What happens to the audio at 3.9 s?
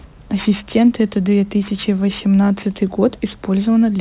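At 3.9 s the speech carries aliasing that runs through the whole clip. Content above 4 kHz folds back downward, consistent with a 16 kHz to 8 kHz rate drop without filtering. It adds gritty, metallic sibilance roughly 20 dB below the voice, unlike a plain low-pass, which would only sound muffled.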